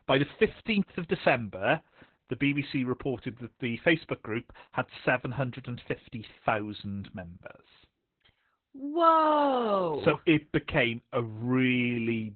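From start to finish the speech carries heavy Opus voice compression. The codec is working in its SILK linear-prediction mode at narrowband, and the sound fits a very low bitrate of around 8 kbps. With so few bits, the excitation is coded coarsely and everything above 4.2 kHz is discarded. Voices come out muffled, hoarse and faintly robotic. On a spectrogram, energy stops at a flat ceiling near 4.2 kHz, with smeared, blocky harmonics beneath it.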